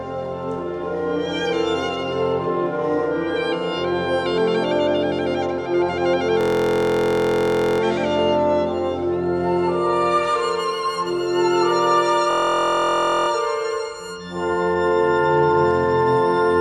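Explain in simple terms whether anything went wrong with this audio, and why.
A system hang loop hits at 6.41–7.80 s and 12.31–13.28 s. The system froze and replayed one 23 ms scrap, making a steady 43 Hz buzz.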